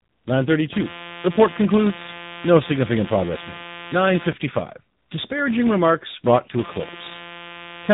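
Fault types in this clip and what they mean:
Filter restarted on every block: the filter drops its state each block, so a small transient starts every block, heard as a steady 172 Hz buzz, which fits a 256-sample block.
AMR narrowband mobile codec: this low-rate mobile speech coding makes the speech buzzy and synthetic, with nothing above about 3.8 kHz, consistent with roughly 8 kbps.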